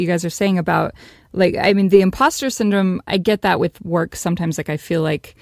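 No technical faults detected anywhere in the recording.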